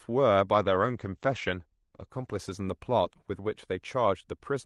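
From 0.54 s to the end, a call bitrate drop occurs: the encoder's bit budget collapses, and the coarse, watery texture suggests a fall from roughly 64 kbps to near 14 kbps. High frequencies shrink from 12 kHz to 8 kHz, muffling the speech for about 1.57 s at its worst.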